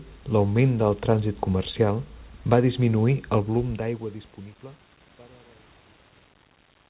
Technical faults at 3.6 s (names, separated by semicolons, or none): none